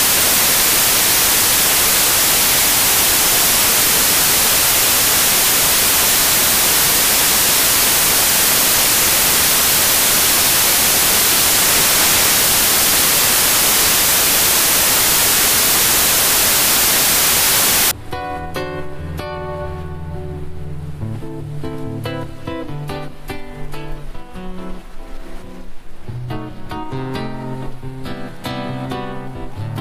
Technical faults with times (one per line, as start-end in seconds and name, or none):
0.00-17.91 samples built from the wrong bytes